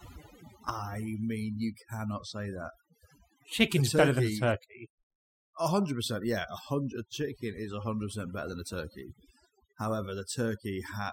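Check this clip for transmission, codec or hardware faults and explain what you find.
One fault runs through the whole clip: overdone noise removal. A noise reducer set far too aggressively pushed individual frequency bands down whenever they sat near its noise estimate, taking the softer parts of the speech with them. The background drops and breaks up into twinkling specks.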